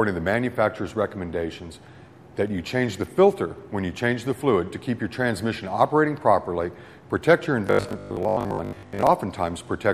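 From 7.67 to 9.09 s the sound turns into a rigid, metallic buzz pinned at 50 Hz, roughly tracking the original. That's robotic sound from repeated short buffers, likely from audio arriving too seldom so roughly 20 ms chunks get replayed for most of that stretch.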